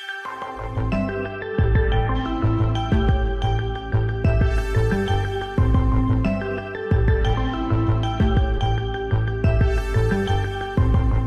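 At 4.24, 7.33 and 8.57 s you get compressed frames skipped: the decoder drops a few whole frames and jumps ahead, losing a sliver, then around 50 ms, then roughly a tenth of a second.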